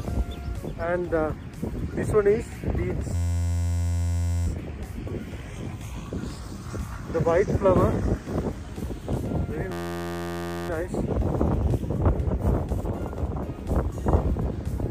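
At 3.15 to 4.47 s and again at 9.72 to 10.69 s there's a system hang loop: the system stalls while the hardware keeps replaying one 11.6 ms chunk, which fits a 512-sample buffer. That gives a steady buzz at about 86 Hz.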